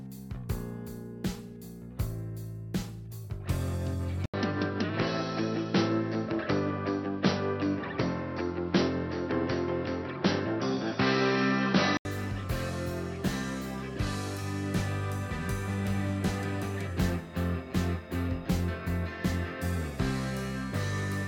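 At 4.26 s the input was likely switched to a poorer device, such as a second microphone or a headset's call profile, and it stays there until 12.05 s. The change opens with a gap of about 80 ms. The sound then turns dull and boxy, with nothing above 5.8 kHz, the level shifts by roughly 5 dB, and a new background noise sits a few tens of dB below the signal. At 12.05 s the fuller band returns.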